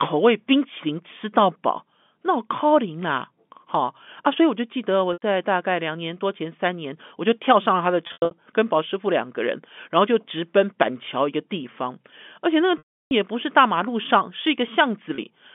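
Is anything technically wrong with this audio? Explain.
Yes, there's packet loss with pitch repetition, four spots in this telephone-band speech: 5.13 to 5.22 s, 8.07 to 8.31 s (broken bits over 240 ms), 12.78 to 13.11 s, and 15.15 s. The receiver fills each gap by looping the last pitch period, so short ones sound like a brief buzzy hold. The 330 ms gap near 12.8 s fades to silence before speech returns.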